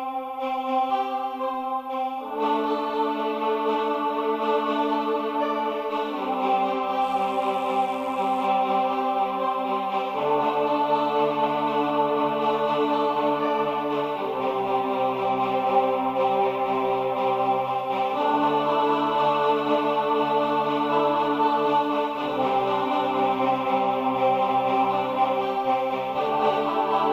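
From 6.99 to 8.49 s a mains buzz appears: switching spikes on 50 Hz power leak in, producing a steady raspy buzz roughly 30 dB below the main sound.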